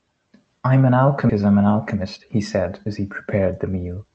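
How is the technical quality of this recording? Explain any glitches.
The speech has two timing glitches, an abrupt jump and then a hurried stretch, both arising in a call path. That path uses the Opus codec, which limits the audio to about 8 kHz and adds its usual coding noise.

At 1.29 s the speech lurches forward with no pause, and the two sides are spliced almost directly. This is a skip ahead: roughly 0.7 s of audio was discarded, either lost in transit or dropped by an overflowing jitter buffer while later audio was already waiting. Nothing was filled in, so the missing stretch simply vanishes and the delay falls by the same amount.

From 1.39 s to 3.85 s the speech sounds rushed but keeps its normal pitch, running at about 113% speed. This is a jitter buffer speed-up. The buffer held more audio than it aims for, so the receiver trimmed many short slices, each one or a few pitch periods long. 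Together these cut about 0.3 s and shortened the delay without shifting pitch.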